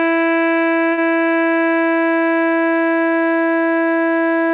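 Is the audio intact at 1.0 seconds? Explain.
No, a short stall from a late packet runs from 0.92 to 1.00 s. The receiver held the music about 54 ms until the packet arrived, so it sounds slightly stretched.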